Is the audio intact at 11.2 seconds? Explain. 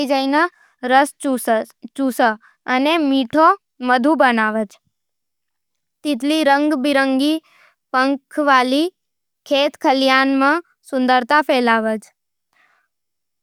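Yes, the speech at 11.2 seconds is intact, with no audible fault at that moment.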